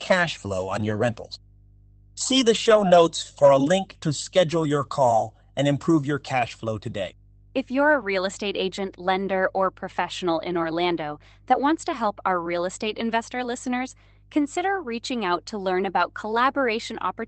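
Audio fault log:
Throughout: mains hum. A steady low tone at 50 Hz sits under the speech for the whole clip, roughly 25 dB below it, with some low harmonics above the fundamental. A ground loop or a nearby transformer is letting the power line leak into the signal path, so the hum never changes with the speech. It stays in the pauses, where it is most exposed.
0.75–0.97 s and 2.65–2.79 s: lost packet rebuilt from error correction. In both spots the speech continues without a break but turns briefly rougher and grainier, for about 0.22 s and then about 0.14 s. Lost packets were replaced by the low-bitrate copies that Opus carries inside the following packet. Those coarser copies fill the gaps, so nothing drops out. The rebuilt audio, 120 ms and then 80 ms, fits runs of 20 ms frames, roughly six and then four, within a call limited to about 8 kHz.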